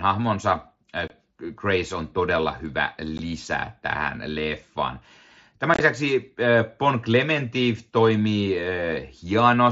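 Unconcealed Bluetooth headset packet loss drops short holes into the speech at 1.08 s, 3.18 s, and 5.74 to 5.80 s, where a cluster of small gaps sounds choppy.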